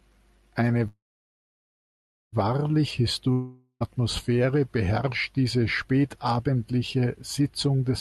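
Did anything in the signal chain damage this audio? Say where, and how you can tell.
Yes, at the network and jitter-buffer stage. From 0.87 to 2.34 s there is a call audio freeze: the last sound stretches briefly, then about 1.3 s of silence. The speech resumes exactly where it stopped, nothing skipped. Packets were likely delayed, draining the buffer and adding roughly 1.45 s of lag.

From 3.32 to 3.82 s there is a long network dropout. A fading concealment buzz fills nearly 0.5 s, with only a brief silence, and the speech comes back about 0.48 s further on. Unlike the freeze, that stretch is missing, likely from lost packets.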